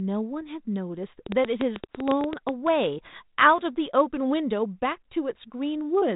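A train of clicks runs from 1.26 to 2.50 s: around fifteen sharp, similar pulses at an uneven pace averaging 10.6 per second, peaking roughly 15 dB above the speech. It ticks over the sound, likely from electrical interference or a struggling interface. The speech stays band-limited below 3.8 kHz throughout, as 32 kbit/s G.726 telephone coding leaves it.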